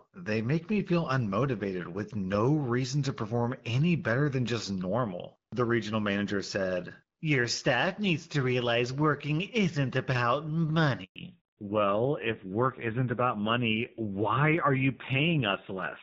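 At 11.04 s, right after "realize working isn't about", there is a handover gap. The call switched from one network to another, and no speech frames got through during the move. The voice fades out within a few tens of milliseconds. Then there is dead silence for 120 ms, until 11.16 s, when the new link comes up. Whatever was said in that stretch is simply gone.

From 11.16 s to the end, a fallback to narrowband is heard. Before the gap, the speech has the fuller top end of the AMR wideband (HD Voice) codec, with only light coding roughness at 12.65 kbit/s. After it, nothing above 4 kHz remains. The voice turns dull, boxy and raspy. That fits a drop to the older AMR narrowband codec at a low rate, around 5.9 kbit/s.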